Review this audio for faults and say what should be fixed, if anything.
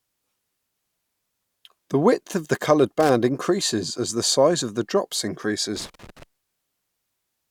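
There's loose connector crackle in two spots, a short burst from about 3.00 to 3.10 s and a longer one from 5.76 to 6.23 s. It sounds like a worn or dirty contact somewhere in the chain flickering between connected and open, so the speech gets chopped up and you hear ragged scratching as the circuit makes and breaks. Worth reseating or cleaning the connectors, and swapping any suspect cable, before the next take.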